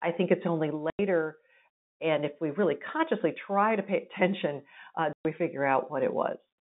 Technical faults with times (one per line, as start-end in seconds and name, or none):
0.90-0.99 packet loss filled with silence
5.13-5.25 packet loss filled with silence